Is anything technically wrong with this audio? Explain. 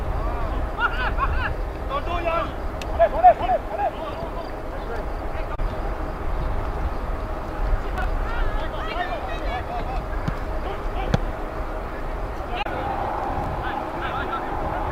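Yes, there are two chunks out of order, at 7.98 to 8.04 s and at 13.42 to 13.46 s. A short block of audio, about 21 ms long, plays late instead of in sequence: two blocks late at 7.98 s, one block late at 13.42 s. Nothing is missing, but the misplaced block creates three abrupt joins, heard as a brief jumbled stutter.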